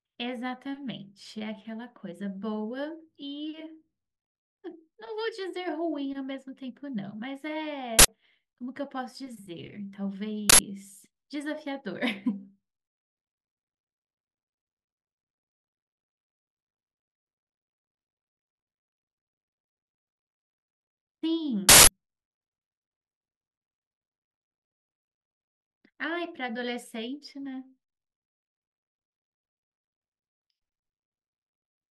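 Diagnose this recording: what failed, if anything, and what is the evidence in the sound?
Uninitialised buffer at 7.99–8.08 s, 10.50–10.59 s and 21.69–21.87 s: loud digital-noise bursts replace the speech, lasting 93, 93 and 186 ms, which fits 4096- and 8192-sample buffers. At the buffer stage, blocks played before audio was written, so leftover memory sounded as samples.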